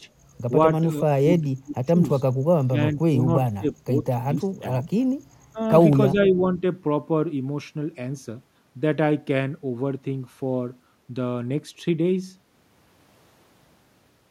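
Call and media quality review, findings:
Speech suppressed in double talk: chopped, ducked sound at 1.18–1.24, 1.42–1.96, 2.58–2.77, 2.94–3.27, 3.46–3.97, 4.59–4.66, 5.52–5.59 and 6.12–6.62 s. Drops range from about 5 to 35 dB, seen as notched envelope and thinned spectrogram bands. Likely the echo canceller attenuating near-end speech as if it were echo.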